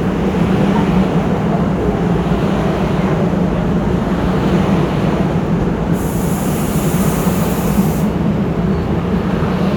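No technical faults can be heard anywhere in this audio, so there is nothing to place in time order.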